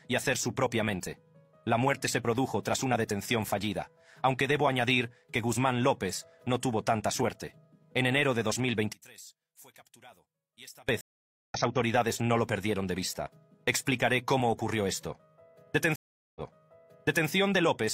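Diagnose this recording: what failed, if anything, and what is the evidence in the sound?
One channel inverted, 8.93 to 10.89 s: the sound drops about 23 dB, likely reversed polarity in the analogue wiring cancelling shared content in the mono sum.

Stream reconnect, network stage: there is a 0.49 s silence at 11.01 s and a 0.40 s silence at 15.96 s. A fresh decoder restarts mid-stream, resuming roughly 0.3 s later the first time and 0.93 s earlier the second.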